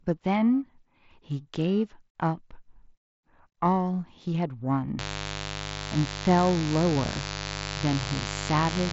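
From 4.98 s to the end, a mains buzz sits fairly close under the speech: switching spikes on 50 Hz mains spraying harmonics, heard as a raspy buzz capped near 7.7 kHz.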